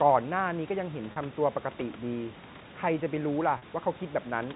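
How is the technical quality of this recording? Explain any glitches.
Two brief glitches stand out, at 1.12 s and 3.58 s. They sit within telephone-band speech that has nothing above 4 kHz, as G.711 coding gives, with room noise about 21 dB below the speech.

Packet loss with pitch repetition: at each point the speech briefly turns into a held, slightly buzzy tone for about 40 ms before it carries on. A gap that long fits two lost 20 ms packets. The receiver bridged it by repeating the last pitch period and fading it out.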